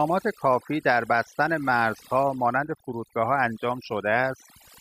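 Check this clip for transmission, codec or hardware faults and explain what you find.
One fault is present, and it comes from processing rather than transmission or hardware: overdone noise removal, running through the whole clip. A noise reduction stage set too aggressively is cutting individual frequency bands down or out whenever their level sits near its noise estimate. The quieter parts of the speech fall under that threshold too and are removed. The gaps in the background drop in level and break up into twinkling specks.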